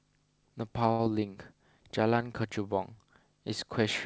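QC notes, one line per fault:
0.92 to 1.01 s, short stall from a late packet: a packet arrived late and the jitter buffer ran dry, so the receiver held the last sound for about 70 ms until it came, then resumed from the same point. Nothing is lost, but the sound drags slightly with a slight buzz or dip.
1.05 to 1.08 s, short concealed packet loss: about 20 ms of audio never reached the decoder in time, and the receiver bridged the gap by extending the preceding sound before blending back into the real signal. The result is a brief smear or wobble.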